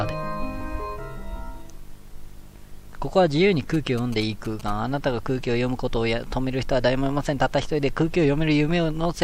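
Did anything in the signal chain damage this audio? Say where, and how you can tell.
Yes. From 3.74 to 4.70 s a galloping dit-dit-dit of short buzzes at a 216.7 Hz rate sits roughly 15 dB under the audio. These are GSM signalling bursts: a nearby 2G handset's radio pulses, rectified in the analogue wiring and demodulated into the signal.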